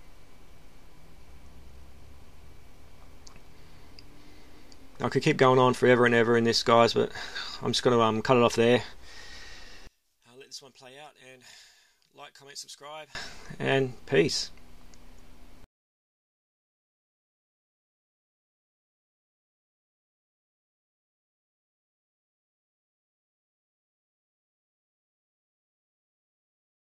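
One channel inverted, from 9.87 to 13.15 s: the level collapses by about 26 dB and what remains is a faint copy. The likely cause is one stereo channel flipped in polarity, so material shared by both channels cancels when summed to mono.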